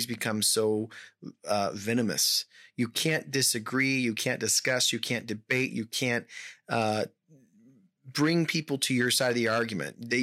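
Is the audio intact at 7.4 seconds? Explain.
Yes, the audio is intact at 7.4 seconds, with no fault at that point in the speech.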